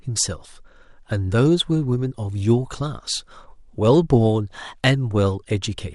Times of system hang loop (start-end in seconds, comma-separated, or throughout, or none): none